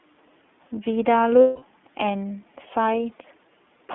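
Throughout, the iLBC codec codes each frame on its own, and its rough, slightly synthetic texture points to 30 ms frames at 13.33 kbps, with sound confined to 250 Hz–3.5 kHz. From 1.41 to 1.63 s, lost iLBC frames leave a 210 ms gap, fitting seven 30 ms frames. The decoder fills it with a repeated pitch cycle that sounds like a held, buzzy vowel, and the speech recovers almost immediately afterwards.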